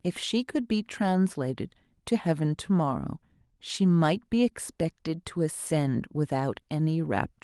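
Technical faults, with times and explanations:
The speech signal plays from its opening to its close with no interruptions or disturbances.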